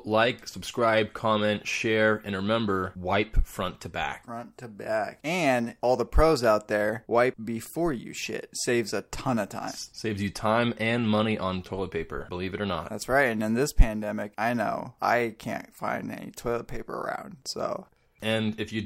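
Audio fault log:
No audible faults detected.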